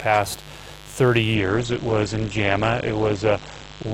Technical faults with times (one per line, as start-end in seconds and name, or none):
0.00-3.93 mains buzz
1.35-3.93 adaptive stream at a lower bitrate